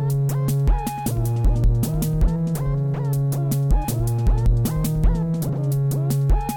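Music with compressed frames skipped at 2.25, 3.83 and 5.48 s. The music jumps ahead by roughly 50, 200 and 300 ms, consistent with whole 23.2 ms frames missing.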